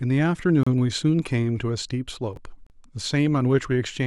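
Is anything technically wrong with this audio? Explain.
Yes. The speech has two kinds of timing fault: silent holes at segment joins and one reordered stretch.

Gap between stream segments, at 0.63 to 0.67 s and 2.67 to 2.70 s: the time stamps of adjacent stream segments don't line up, so the player pads the difference with silence, about 32 ms and 34 ms. The holes are about 2 s apart, which fits 2-second segments. Each is a brief hard-edged dropout in the speech. No audio is missing, but the timing is stretched slightly at each join.

Chunks out of order, at 2.33 to 2.37 s: a 10 ms chunk was delivered or written late and plays three chunks after its proper position. All the material is present, but that 40 ms stretch is sequenced wrongly and has three abrupt joins. It sounds like a short jumbled blip in the speech.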